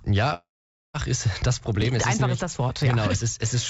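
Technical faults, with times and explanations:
0.34 to 0.96 s, long network dropout: about 0.6 s of audio is missing. The last sound is stretched into a brief fading buzz, then roughly half a second of silence follows before the audio resumes further on, likely because packets stopped arriving and the receiver concealed the gap.
1.82 s and 2.82 s, overlapping chunks: a click or stutter about 1.0 s apart. Each processing chunk begins about 6.5 ms before the previous one ended, so that sliver plays twice at the join and the repetition breaks the waveform's continuity.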